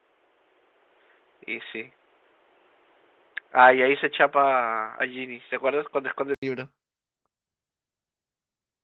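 From 0 to 6.43 s the speech likely came through a poorer input device: nothing above 3.8 kHz, a boxier tone, then a brief 80 ms silence before fuller sound returns.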